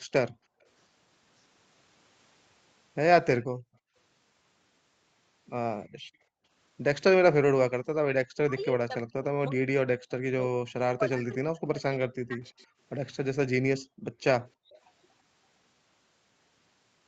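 At 0.31 to 0.61 s, 3.43 to 3.95 s and 5.91 to 6.43 s, the background is gated by the echo canceller. It clamps the microphone by about 40 dB while the far end plays, so the room sound briefly vanishes. From 8.45 to 12.61 s the speech is suppressed in double talk: roughly 3 s of it dips by up to about 40 dB or breaks up, likely because the canceller attenuated the talker along with the loudspeaker echo. At 12.47 to 12.65 s an echo leak lets a faint copy through, 332 ms late and roughly 40 dB below the speech, likely residual loudspeaker pickup. The background is gated again from 13.8 to 14.7 s. A second echo leak at 14.47 to 14.8 s repeats the 332 ms copy, stronger at roughly 30 dB down.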